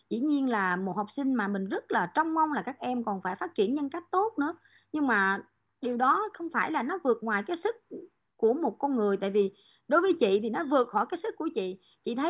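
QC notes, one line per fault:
No technical faults heard.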